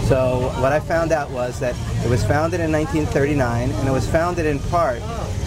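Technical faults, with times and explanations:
No technical faults can be heard anywhere in this audio.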